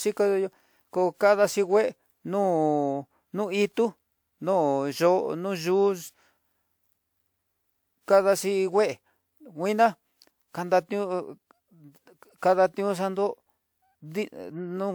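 Throughout the speech there is generation loss: a swirly, hollow, smeared quality with blurred consonant onsets, beyond what 128 kbit/s WMA alone would give, likely from about three successive encodes. A spectrogram shows nothing above 20.1 kHz.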